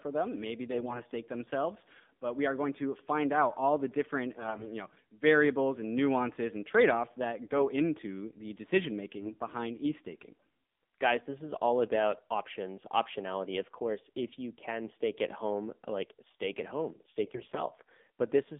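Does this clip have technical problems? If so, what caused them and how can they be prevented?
Yes. The speech carries AMR narrowband mobile codec damage throughout. The line is confined to about 200 Hz to 3.6 kHz, and the voice sounds buzzy and synthetic, which fits a low mode around 7.4 kbps. Unlike plain band-limiting, the thinness comes with this vocal-tract-model coloration. Carrying the call over a wideband or higher-rate codec prevents it.

AMR bit errors affect the sound at 0.70–1.03 s, 4.36–4.72 s, 9.16–9.32 s and 17.24–17.62 s. Flipped bits from a weak radio link misplace the excitation pulses, making the voice hoarse and gargly while pitch and level hold. Lost frames would instead leave gaps or repetition. A stronger link or better error protection prevents it.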